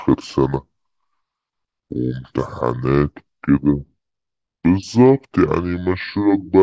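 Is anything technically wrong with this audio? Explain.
Yes. The speech has a wrong sample rate fault that runs through the whole clip. The samples are being played back slower than they were captured, with no rate conversion, so everything runs at about 0.67 times normal speed and pitch falls by about 7.0 semitones. That ratio fits audio recorded at 24 kHz but played at 16 kHz. The voice sounds low, heavy and drawn out, with every syllable stretched.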